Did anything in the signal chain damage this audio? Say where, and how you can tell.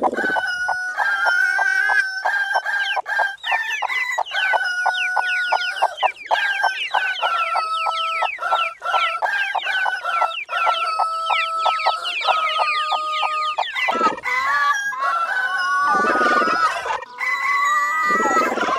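Yes. The damage sits in the compressed stream, at the codec or storage stage. Four brief blips stand out, at 5.99, 11.77, 13.91 and 18.02 seconds. Each lasts under 20 ms. They are short, isolated glitches, not steady noise. That pattern points to damaged data in a compressed stream. Some bytes were lost or overwritten. The decoder misread those frames and lost sync. It then searched for the next valid frame header, and the glitch was heard in that gap.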